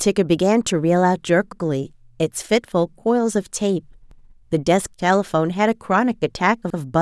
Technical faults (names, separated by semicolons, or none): overlapping chunks